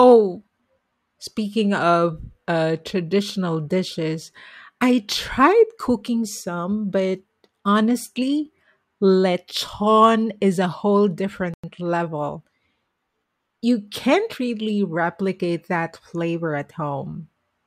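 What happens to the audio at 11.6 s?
A wireless link that likely stalled, a Bluetooth stall, caused a gap here: interference held back audio packets, the headphones' buffer emptied, and playback had nothing to play until the resent data arrived. Right after "lechon is a whole", the speech drops to dead silence from 11.54 to 11.64 s, a gap of about 97 ms, and then carries on. It sounds like a brief hole cut into the speech rather than a fade.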